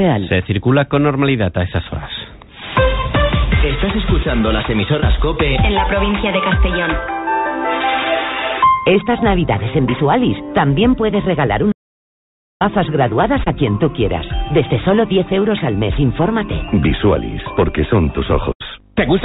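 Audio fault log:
5.00 s and 13.44 s, short concealed packet loss: about 20 ms arrived too late each time, so the receiver extended the preceding sound and blended back, leaving a brief smear.
11.72–12.61 s, audio dropout to silence: 0.89 s of silence with no room tone, likely from the input link failing while recording continued.
18.52–18.62 s, burst of packet loss: about 80 ms lost in a row. The decoder carried the last sound forward, fading it, then resumed with that stretch missing.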